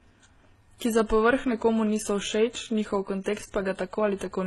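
A speech clip that has most likely passed through more than one lossy codec, a case of transcoding between lossy codecs in which a low-rate MP3 stage was followed by a low-rate HE-AAC stage. The second encoder spends its small budget re-coding the first one's smearing and adds its own, so both kinds of artefact sit on top of each other for the whole clip. Nothing is left above 12.3 kHz, the lowest cut-off in the chain.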